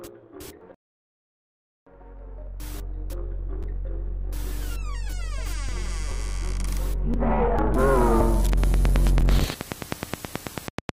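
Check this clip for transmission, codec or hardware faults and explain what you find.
Two faults are present: a rebuffering stall near the start and a train of clicks near the end.

From 0.75 s to 1.87 s there is a rebuffering stall. The player exhausted its downloaded audio and halted until more data arrived, so playback drops to silence for about 1.12 s and then resumes exactly where it stopped. No material is skipped. The gap simply inserts extra time into the timeline, heard as an abrupt dead pause followed by a seamless continuation.

From 8.53 s to 10.90 s a train of clicks runs over the sound at a regular 9.33 clicks per second, about twenty in all. Each pulse has much the same shape and peaks roughly 20 dB above the surrounding signal, so the clicks come through as a steady, prominent ticking. Such evenly repeated, similar impulses are likely caused by electrical interference from nearby equipment or a faulty connection or power supply injecting a spike at a fixed rate.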